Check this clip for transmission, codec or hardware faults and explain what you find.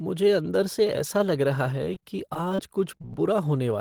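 Transmission faults are present: a stretch of repeated packet loss, then three isolated short losses.

From 1.94 to 2.59 s, just after "ऐसा लग रहा है", repeated packet loss (robotic sound) sets in. The signal drops out about four times, with gaps up to roughly 29 ms, each patched by extending the preceding sound. Hole follows hole closely, so the sound turns choppy rather than briefly smeared.

Short concealed packet loss occurs at 2.97–3.01 s, 3.02–3.04 s and 3.13 s, each losing 10–20 ms. The receiver continued the last sound and blended back into the real signal. Each is a lone smear or wobble, not a sustained robotic texture, because the gaps stand apart.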